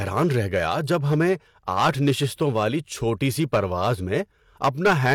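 Speech, with hard clipping throughout. The signal is driven about 10 dB past what the chain can pass. Louder peaks hit the ceiling and are cut flat, roughly one sample in fifty. Those flat tops add high harmonics, heard as harsh crackle on peaks.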